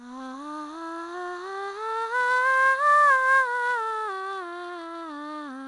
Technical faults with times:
0.00-5.67 4-bit ADPCM compression

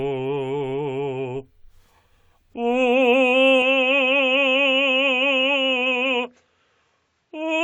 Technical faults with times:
3.62-7.63 input switched to a poorer device

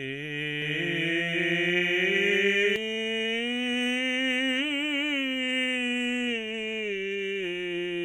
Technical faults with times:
0.62-2.76 doubled audio track

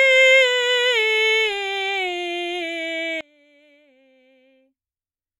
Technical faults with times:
3.21-5.40 one channel inverted

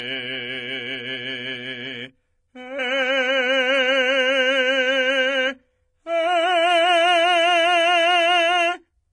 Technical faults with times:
0.00-9.13 transcoding between lossy codecs

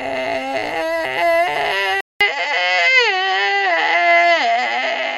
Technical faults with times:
2.01-5.18 input switched to a poorer device

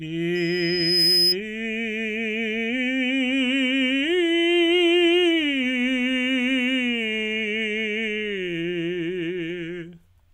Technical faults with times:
0.35-1.35 loudspeaker feedback squeal

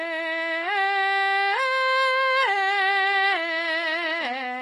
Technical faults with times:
0.00-4.62 HE-AAC compression

